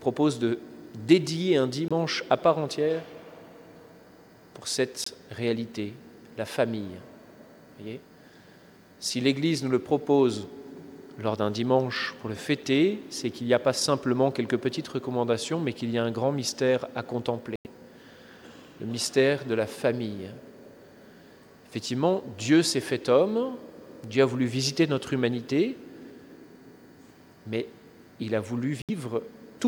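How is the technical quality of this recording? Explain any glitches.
The recording has four short dropouts, where the sound cuts abruptly to silence and then resumes. They occur at 1.88 to 1.92 s, 5.04 to 5.09 s, 17.56 to 17.67 s and 28.82 to 28.90 s, lasting roughly 40 ms, 40 ms, 110 ms and 80 ms. The longest is the one at 17.56 s.

These are corrupt frame muted faults. Bits inside compressed audio frames were damaged, so the decoder rejected those frames and the player filled their slots with silence. The gaps point to two, three, five and three lost frames respectively. Because the missing frames were replaced rather than skipped, the timing stays intact and everything after each gap lines up as before.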